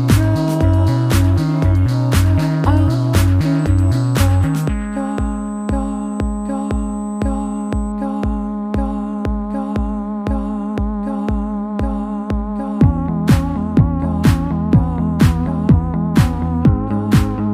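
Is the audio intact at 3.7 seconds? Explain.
No. At 3.7 s the audio carries USB whine, a steady 8 kHz tone running from 3.59 s to 7.92 s, roughly 30 dB below the signal. The USB bus pulls current in bursts every 125 microseconds, and that ripple leaks through power or ground into the audio path as a fixed-pitch whistle. On a spectrogram it shows as a thin horizontal line at 8 kHz spanning those seconds. The waveform would barely show it.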